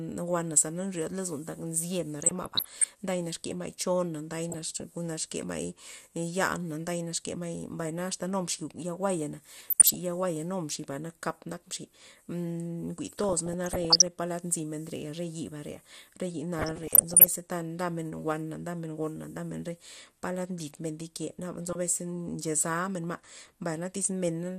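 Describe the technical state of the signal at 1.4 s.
At 1.4 s the speech sounds dull, gurgly and grainy, as it does throughout, which points to MP2 compression at a low rate, likely around 80 kbps, switching upper sub-bands off.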